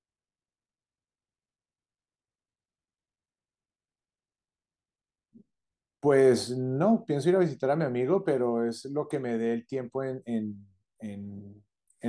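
No technical faults are audible in the speech.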